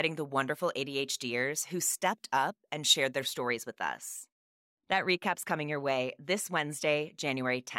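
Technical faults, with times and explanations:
0.00 to 3.24 s, pre-emphasis left on: until just before "stories with us", the treble sits about 8 dB higher at 10 kHz than at 1 kHz. The high end was lifted on the way in, as emphasis schemes do to ride above noise, but the matching de-emphasis cut never came back out. The rising tilt fits the CD 50/15 µs curve, and it leaves the speech thin, bright and sibilant, with exaggerated s sounds and little body.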